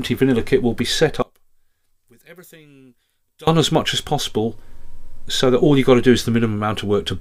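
From about 1.22 s to 3.47 s the sound drops by about 28 dB and goes faint, with the shared sound basically gone. That's likely one channel inverted, so the shared content cancels once the two sides are summed.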